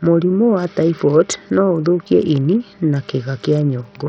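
From start to finish the speech has that starved, gritty quality you get from Bluetooth SBC compression at a small bit pool, which fits a link running around 64 kbps. The top bands keep dropping out and flickering, so the treble comes and goes, and a coarse, grainy noise with some aliasing sits over the whole thing. The damage is heavy, and SBC is the likely culprit.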